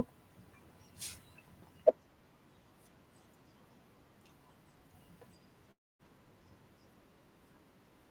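From 5.71 to 6.02 s, a long network dropout likely halts the audio: the last sound fades as a buzz or hiss into silence, and 0.28 s of speech is lost.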